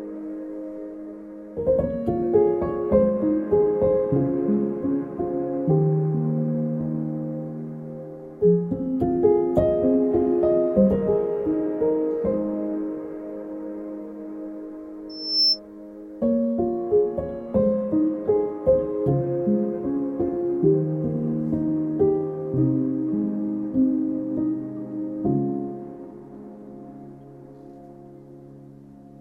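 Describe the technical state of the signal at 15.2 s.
Loudspeaker feedback squeal, 15.09–15.60 s: mic-to-speaker loop gain above one makes a 5.3 kHz tone swell over roughly 0.3 s, unlike a constant whistle.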